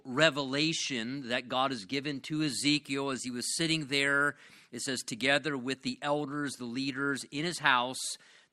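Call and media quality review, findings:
No audible faults found in this recording.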